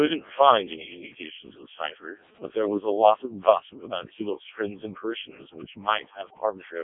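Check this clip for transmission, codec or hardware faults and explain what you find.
One fault is present throughout the speech: the Codec 2 vocoder. The whole clip sounds robotic and buzzy, with nothing above 3.7 kHz. The decoder rebuilds speech from sine waves using only pitch, voicing and envelope, and the heavy damage points to its lowest 0.7 kbit/s mode.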